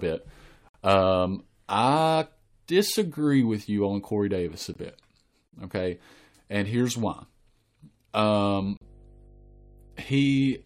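From 0.69 to 0.74 s the speech drops into a hard-edged silence of about 57 ms, and a shorter cut follows at 4.74 s. These are gaps between stream segments. Segments spaced 4 s apart carry timestamps that leave a small hole, which playback fills with silence, so no audio is lost.

From 8.57 s to the end, a steady low drone sits under the speech. This is mains hum at 50 Hz, roughly 25 dB below the speech, caused by the power line coupling into the signal. Within it, from 8.77 to 8.82 s, a third gap between stream segments silences about 42 ms, again on the 4 s segment spacing.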